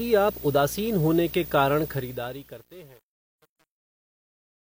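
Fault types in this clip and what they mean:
Video or display buzz: Interference from a screen or video cable leaks into the audio path, adding a buzz at the 59.94 Hz field rate with hash above it and a high 15.7 kHz line-rate tone, running throughout at roughly 15 dB below the speech.
Truncation distortion on a fade: A digital fade keeps too few bits and adds no dither, so from 1.89 s the fading speech coarsens into square steps, gritty from about 2.13 s onward, which fits an 8-bit gain stage.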